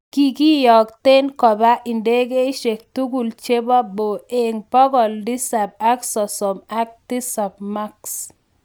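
Nothing stood out as a technical fault on listening to the speech in this clip.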